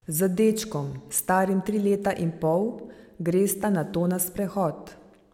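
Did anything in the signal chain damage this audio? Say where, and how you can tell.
No, nothing in this speech clip stood out as damage from any stage of the signal chain when I listened to it.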